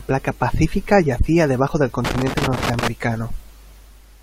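At 1.67 s there is a brief glitch. This is damaged data in a compressed stream. Part of the coded stream is corrupt, so the decoder misreads that frame, loses its place and hunts for the next valid header.

From 2.05 s to 2.88 s an irregular burst of crackle and scratching runs over the speech. This is loose connector crackle. A worn or dirty contact keeps making and breaking, chopping the signal into rough fragments for nearly a second.

At 2.51 s, inside that crackle, there is one sharp click. It is most likely dropped samples. Only a handful of samples, well under a millisecond, go missing. The waveform jumps to a later value, leaving a click without removing any audible sound.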